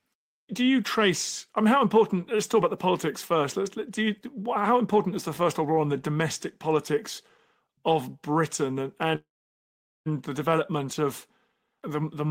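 At 9.15 s the speech stalls in a call audio freeze until 10.08 s: a brief fading tail, then roughly 0.8 s of silence. It resumes exactly where it stopped, so nothing is lost, just about 0.9 s of added delay. Likely packets held up and an emptied jitter buffer.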